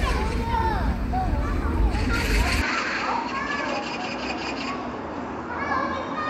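Everyday sound that turns duller and about 5 dB quieter from 2.62 s to the end, with a faint new noise floor well below the signal; the likely cause is an input switched to a poorer device. The spectrogram shows content above 7.6 kHz vanishing at that moment without any gap, and the waveform steps down slightly in amplitude.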